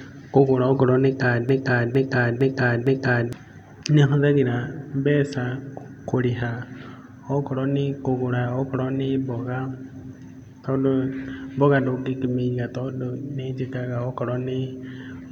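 At 1.49 s the playback chain likely stalled and kept resending the last fragment it held, producing a broken-record loop. A 0.46 s slice of the speech repeats exactly four times, back to back, until 3.33 s, so the same short stretch stutters mechanically with identical timing on every pass. Whatever should have been heard across those 1.84 s never arrives, and the speech resumes afterwards with that portion simply gone.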